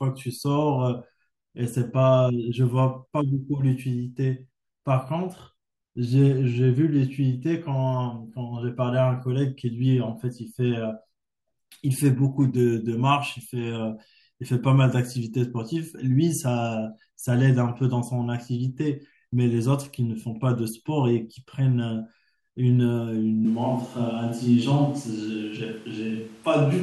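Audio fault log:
23.45 s to the end (26.83 s), switch to a distant microphone: the voice abruptly turns roomy and hollow and loses its low end, while the overall level barely changes. Background noise becomes audible at roughly 30 dB below the voice, and the hollow sound continues to the end. This is likely a change from the close microphone to one placed farther away, which picks up more room reflection and ambient noise and less of the voice's bass.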